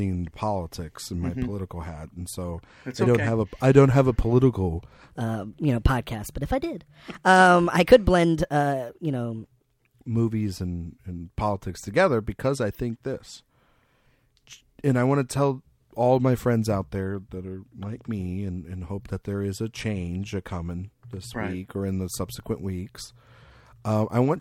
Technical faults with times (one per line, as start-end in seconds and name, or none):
5.09-9.44 section at the wrong speed